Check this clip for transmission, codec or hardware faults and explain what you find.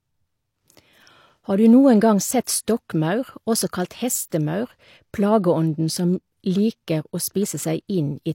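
One codec fault runs through the whole clip: low-bitrate audio saved at a high bitrate. The speech has nothing above 16.3 kHz. Its likely cause is a low-bitrate first encode, consistent with HE-AAC near 32 kbit/s, later re-saved as MP3 at a rate that fits 320 kbit/s. The large second file cannot restore what the first encode discarded. The first encode's damage remains, and the clean MP3 pass adds almost nothing of its own. That separates it from a file simply encoded once at low bitrate.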